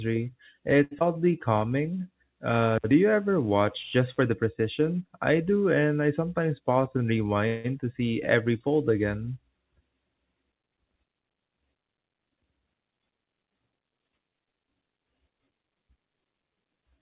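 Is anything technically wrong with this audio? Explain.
Yes, there are five faults. The audio passes through a narrowband call path with nothing above 4 kHz, which fits G.711.

At 0.84 to 0.94 s a sound is held unnaturally long, with a faint buzz or dip. This is a short stall from a late packet: the jitter buffer ran dry and the receiver stretched the last sound for about 70 ms until the packet arrived, so nothing is lost.

Right after, from 0.99 to 1.04 s, there is a brief smear. This is short concealed packet loss. About 40 ms never arrived, and the receiver covered it with a 15 ms continuation of the preceding sound before blending back.

From 2.78 to 4.31 s, just before "precision I do and", a steady, raspy buzz sits underneath at about 40 dB below the speech. This is mains buzz at 60 Hz. Sharp switching spikes at twice the mains rate produce harmonics that reach well up the spectrum.

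From 6.59 to 7.05 s, right after "do and I sometimes", the speech sounds hurried but keeps its pitch. This is a jitter buffer speed-up. The receiver trimmed pitch-period-sized slices, about 50 ms in total, running the audio roughly 8% fast to shed excess buffered delay.

From 7.48 to 7.67 s, just before "to see every fold", the sound stalls into a fading buzz or hiss lasting 167 ms, never reaching silence, and then resumes where it left off. This is a call audio freeze, likely from held-up packets emptying the jitter buffer.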